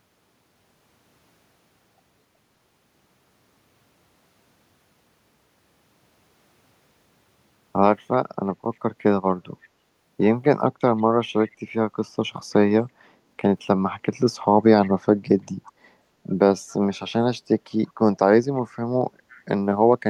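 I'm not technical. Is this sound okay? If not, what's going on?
No. This speech clip has an echo leak. The likely cause is a loudspeaker on the other end of the call: its echo canceller didn't remove all of the voice its microphone picked up, so some of it was sent back. You hear faint, brief scraps of the voice repeated about a third of a second late, at 10.98, 11.45, 14.84, 15.65 and 19.33 seconds. The echo is very quiet and is a little louder around 14.84 seconds.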